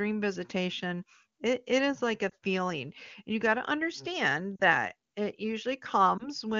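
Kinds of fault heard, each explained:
lost AMR speech frames: Radio errors corrupted frames so they failed their checksum, and the AMR-WB decoder, running at 23.85 kbit/s, filled each gap by reusing the last good pitch and vocal tract settings at falling gain. One 20 ms frame is lost at 2.30–2.33 s, between "it it is like" and "feeling and you got", and another at 6.18–6.28 s. Two frames (40 ms) are lost at 4.56–4.62 s. Each leaves a brief concealed patch in the speech.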